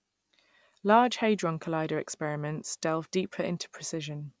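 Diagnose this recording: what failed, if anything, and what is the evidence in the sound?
Nothing in this recording points to a failure at any stage. No stage between capture and playback leaves a mark in the sound that would call for a diagnosis.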